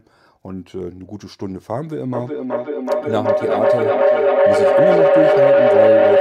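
Speech that runs into feedback howl from about 2.14 s to the end of the clip. A tone near 500 Hz builds and grows rather than decaying, pulsing roughly every 400 ms, and peaks at about 9 dB above the speech. This is a closed acoustic loop, typically two devices on the same call in one room, where each pass from loudspeaker back into microphone adds gain and narrows the sound to the frequency the loop favours, persisting until the loop is broken.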